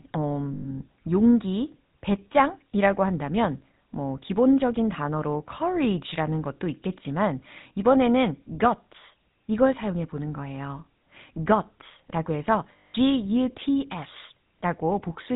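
The whole clip carries GSM full-rate codec damage, plainly audible, which fits 13 kbps coding. Speech sounds buzzy and gravelly. Nothing passes above 4 kHz.

Lost GSM frames occur from 0.54 to 0.65 s and from 12.76 to 12.96 s. Missing frames repeat the last good one, holding a rough, metallic ring.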